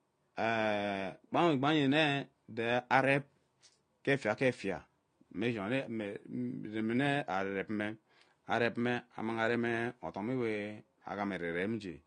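From start to finish the speech carries AAC compression damage, and it is plainly audible. Nothing is present above about 9.9 kHz, so the top end sounds dull and closed in. Sibilants and sustained sounds take on a fizzy, warbling texture. That points to an encoder that, likely running AAC-LC at a low rate consistent with 32 kbps, dropped the upper band and left gaps in the quantised spectrum.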